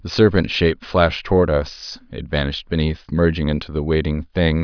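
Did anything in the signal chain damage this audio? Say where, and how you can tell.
No, nothing in this speech recording stood out as damaged when listening.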